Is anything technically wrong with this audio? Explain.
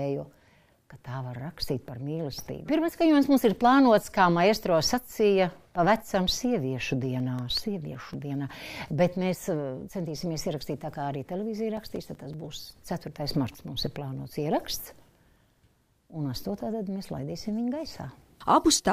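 Yes. CD scratch ticks occur from 7.2 to 9.07 s and from 11.59 to 13.08 s, each a regular train of about six ticks a second lasting a few milliseconds. A surface blemish defeats error correction once per disc revolution, so the player patches or mutes those samples. The even spacing, unlike random vinyl crackle, ties the ticks to disc rotation.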